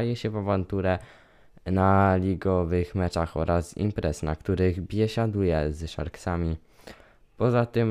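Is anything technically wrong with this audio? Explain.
No, nothing technically wrong can be heard in this recording. There is no audible fault anywhere in the speech.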